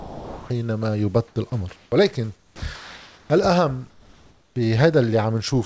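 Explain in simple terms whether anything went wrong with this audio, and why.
Several stretches of the speech go missing and are replaced by a soft, even hiss. It happens right at the start, from 0.0 to 0.5 s, and again from 2.36 to 2.62 s and from 2.76 to 3.30 s. In each gap a bit of real speech is lost, not just silence. This is sound dropped by the voice detector. The sending side likely mistook quiet parts of the speech for background, stopped sending, and the receiving end played filler noise until the speech was picked up again.

In the pauses, the natural room background briefly turns into a flat, featureless hiss: from 1.28 to 1.36 s, from 1.76 to 1.92 s, and from 3.90 to 4.56 s. The middle one is a little quieter than the real background, and the last is clearly quieter, so the room seems to dip away. This is comfort noise in place of the background. Most likely, when the sender thinks nobody is talking it stops sending audio, and the receiver fills the gap with synthetic noise that only roughly imitates the real room.

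Twice, the speech coming back after a pause starts abruptly, as if its first sliver were snipped off: at 1.9 s, and from 4.49 to 4.56 s, where the missing beginning is longer. This is an onset clipped by the voice detector. The detector was likely slow to notice the speech had resumed, so those opening moments were never sent and filler noise played instead. The call link itself also limits the sound to nothing above 8 kHz, which makes it less crisp.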